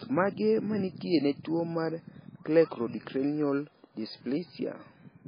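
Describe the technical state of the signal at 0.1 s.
At 0.1 s the speech already has heavy MP3 compression damage, which runs through the whole clip. Nothing gets through above 5 kHz, and the speech sounds watery and swirly, with smeared attacks. That likely comes from a starved encoder zeroing weak frequency lines, which fits a bitrate around 16 kbps.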